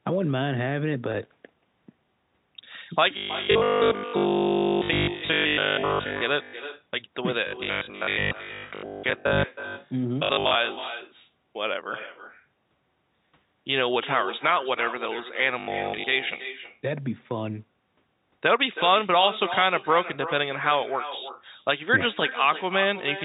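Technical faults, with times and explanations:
Throughout: echo with no canceller. Every phrase returns roughly a third of a second later as a quieter copy, about 12 dB down and thinner, because the far end's loudspeaker feeds its microphone and nothing subtracts that path before sending it back.
1.12 s: packet loss with pitch repetition. One 20 ms packet went missing, and the receiver bridged it by repeating the last pitch period, so the gap is heard as a brief held, slightly buzzy tone rather than a dropout.
3.17 to 6.21 s, 7.47 to 10.55 s, 15.60 to 16.04 s: robotic sound from repeated short buffers. The sound becomes a rigid metallic buzz at 50 Hz that still loosely tracks the speech, most completely in the first stretch, where nearly all the audio is replaced. This is likely caused by audio arriving too seldom, with the last 20 ms being repeated to fill time. That repeat length fixes the buzz at one over 20 ms.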